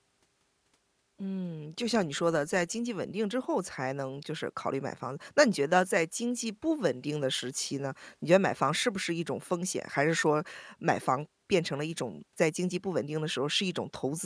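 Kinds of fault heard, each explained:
Nothing stood out on listening to the speech in this recording.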